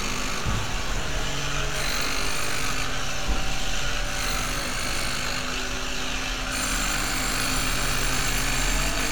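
No technical faults are audible.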